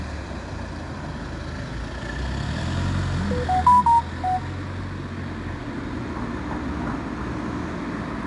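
From start to finish there's 4-bit ADPCM compression, and it's plainly audible. Each sample is coded as a coarse step from a prediction, so a gritty hiss rides on every loud passage, and nothing comes through above about 10.7 kHz, which fits a low-rate setting around 89 kbps.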